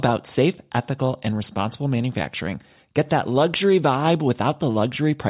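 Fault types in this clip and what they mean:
No fault types can be heard in this clip.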